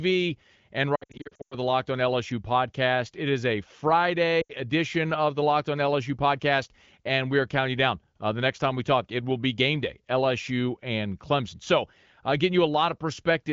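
Lost AMR speech frames from 0.95 to 1.55 s remove about 380 ms in scattered gaps, the longest 100 ms. The wideband decoder repeats and quickly fades its last settings, giving warbles and dropouts. An 80 ms run at 4.41 s dips briefly.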